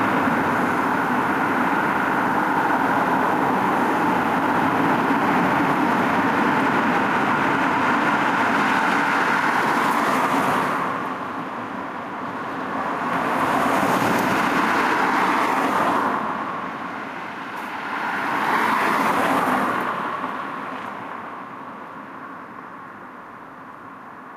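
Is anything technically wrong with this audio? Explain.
Yes. Throughout, there is gain pumping: the gain swings by roughly 20 dB, pulled down on every loud sound, squashing the dynamics. It is likely an over-driven input pulled down by a fast limiter.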